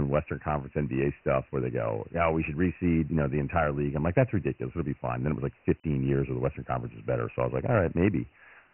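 From start to finish the speech carries Dialogic VOX ADPCM damage. Nothing sounds above 3 kHz, which fits 6,000 samples a second at about 24 kbps. Coarse 4-bit steps leave heavy, gritty hiss trailing the speech. Everything sounds thin and rough.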